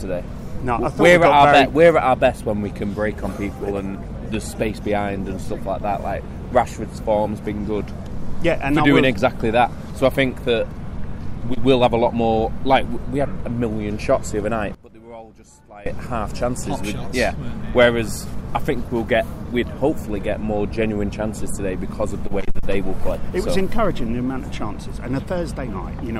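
From 14.75 to 15.86 s the sound suddenly hollows out, dropping about 20 dB as the centred content and low end nearly disappear, leaving a faint residue. This is likely one channel inverted: with reversed polarity, everything common to both channels cancels when summed to mono.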